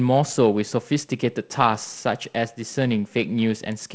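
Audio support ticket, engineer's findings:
No faults found: the speech carries G.722 wideband coding, with bandwidth reaching about 7 kHz, a light hiss in the upper band and a slightly grainy lower band that fits the 48 kbit/s mode.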